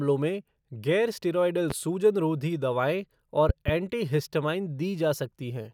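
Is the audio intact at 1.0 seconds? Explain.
Yes, at 1.0 seconds the speech plays through intact, with no dropout, click, distortion or other fault at that point.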